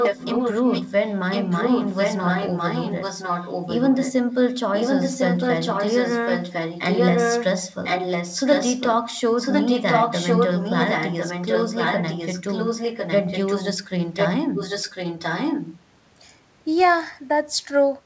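An echo leak runs from 0.0 to 4.13 s, 4.5 to 8.92 s, 9.36 to 13.73 s and 14.15 to 15.8 s: the speech returns about 1.05 s late, only slightly quieter, likely from a loudspeaker echo canceller failing. Unlike reverberation, it is a separate, recognisable repeat rather than a smear.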